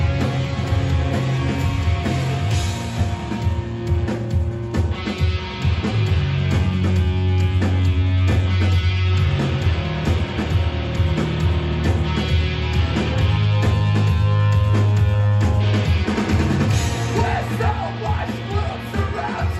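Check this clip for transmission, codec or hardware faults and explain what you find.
No faults can be heard anywhere in the clip. There is nothing here that needs explaining.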